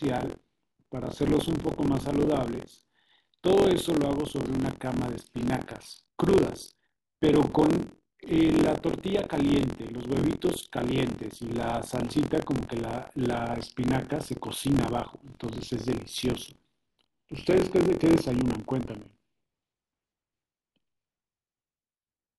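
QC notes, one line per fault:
Throughout, buffer tearing: a steady robotic buzz at about 43 Hz rides on the speech and drops away in the gaps between phrases. The writer and the hardware reader of the ring buffer have slipped out of step, so each period splices in a slice, roughly a sixth of it, holding sound from around 50 ms earlier, with hard joins on both sides. The buzz rate fits a 1024-sample buffer.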